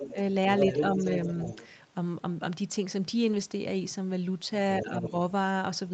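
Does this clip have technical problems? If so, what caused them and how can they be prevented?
Yes. A residual echo likely got past the echo canceller, so the other side's voice leaking through is audible from 0.0 to 0.22 s, 0.58 to 1.68 s and 4.8 to 5.11 s, roughly 5 to 10 dB below the talker. Tuning the canceller, or using a headset instead of a loudspeaker, would prevent this.

Speech suppressed in double talk likely follows when the canceller cannot tell the talker from the echo and turns both down. The voice dips by about 5 dB from 0.94 to 0.99 s, and by about 10 dB from 4.82 to 5.14 s. Better double-talk detection in the canceller would keep the near talker at full level.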